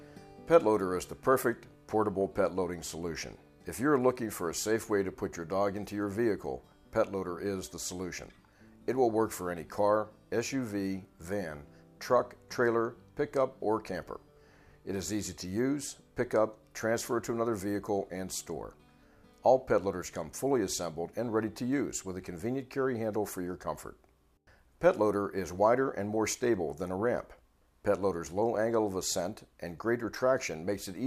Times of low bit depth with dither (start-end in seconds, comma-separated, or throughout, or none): none